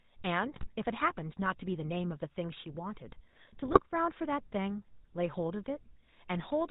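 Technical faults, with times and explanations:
Throughout: GSM full-rate codec. The speech has the plainly audible buzzy, gravelly roughness of GSM full rate, which fits a 13 kbps stream. The codec rebuilds the voice from a vocal-tract model excited by sparse regular pulses, and nothing above 4 kHz survives.
0.54 to 0.67 s and 3.66 to 3.81 s: GSM bit errors. Both bursts break into squawks, pops and gargling, the first heavier, pointing to roughly 3% and 2% bit error rates. Corrupted filter, pitch and gain values distort the spectrum and level frame by frame.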